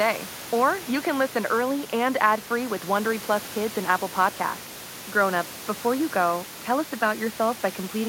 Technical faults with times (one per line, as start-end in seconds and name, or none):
none